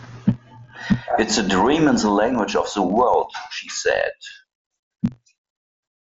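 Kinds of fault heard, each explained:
Filter restarted on every block: each block starts from silence with a small tick, heard as a 46.9 Hz buzz under the speech, fitting 1024-sample blocks.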